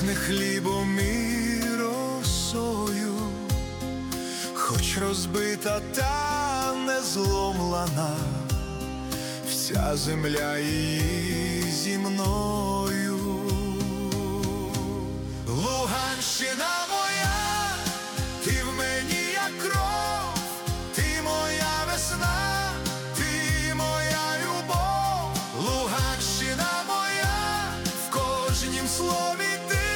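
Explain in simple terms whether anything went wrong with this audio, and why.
At 10.37 to 10.39 seconds there is a loud pop. It is one sharp burst, much louder than the sound around it, which keeps going underneath. A sudden electrical jolt, likely from a plug, switch or static, caused it.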